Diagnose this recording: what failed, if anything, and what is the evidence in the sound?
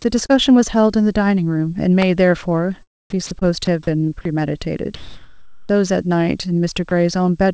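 Network stage, short concealed packet loss: at 0.26 to 0.31 s about 40 ms of audio failed to arrive, and the receiver synthesised roughly 31 ms of it. At 3.39 to 3.43 s a 20 ms gap was filled for about 19 ms. Both are heard as a brief smear. On a spectrogram the harmonics run on unnaturally flat, then crossfade back. The waveform shows a repeated, smoothly decaying cycle instead of fresh detail.

Analogue wiring stage, electrical switching spike: a sharp snap at 2.02 s, lasting about 6 ms, sits on top of the speech. It is likely a nearby switch or static discharge coupling an arc into the audio line. The waveform shows a near-vertical transient well above the surrounding envelope. The spectrogram shows a thin vertical stripe spanning the whole band, up to the 8 kHz ceiling of the G.722 path.

Call-processing stage, sound dropped by the voice detector: speech gives way to steady noise at 3.27 to 3.31 s, 3.65 to 3.67 s, 4.21 to 4.25 s and 6.89 to 6.91 s, each 20 to 40 ms long. 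Most likely the sender's detector judged quiet speech or word endings to be background and stopped transmitting, and the receiver played comfort noise. Spectrograms show harmonic structure abruptly replaced by a uniform smooth wash, with waveform detail flattened.

Call-processing stage, comfort noise in place of the background: from 4.95 to 5.69 s the real background, about 33 dB below the loud passages, becomes a steady, featureless hiss about 4 dB different in level. The likely cause is discontinuous transmission during the speech pause, with the receiver generating shaped noise from occasional updates. On a spectrogram the textured background turns into an even, static noise floor. The waveform shows a flat, constant-amplitude band with a step at each edge.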